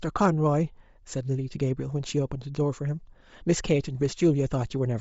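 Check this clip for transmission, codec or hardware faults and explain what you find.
One codec fault runs through the whole speech clip, and Bluetooth LC3 compression is the likely cause. A breathy, grainy noise fills the upper band, which fits a bitrate near 32 kbps. MP3 at low bitrates cuts the top band away, but here it hisses. The smearing stays tight in time, consistent with 7.5 ms frames.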